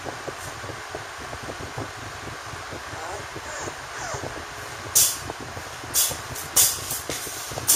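No technical faults are audible.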